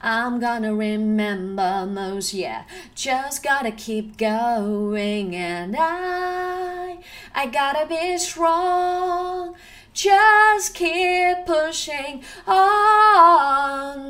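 No technical faults can be heard anywhere in the audio, so there is nothing to describe in time order.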